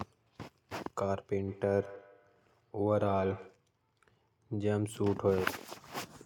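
Feedback echo between two devices runs from 1.37 to 3.64 s in this speech clip. The speech comes back at a steady interval of roughly 150 ms, peaking at about 18 dB below the direct signal. Two devices in the same room share the call, and one plays out what the other's microphone sent. That microphone picks the playback up again. Each device's echo canceller removes only its own output, so this loop gets through.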